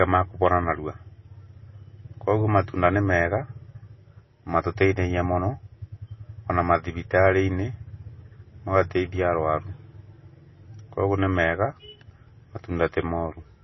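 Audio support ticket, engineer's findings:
MP3 compression, throughout: nothing above 5.8 kHz, watery swirl on the speech and smeared attacks, likely a low-bitrate encode, which fits about 24 kbps.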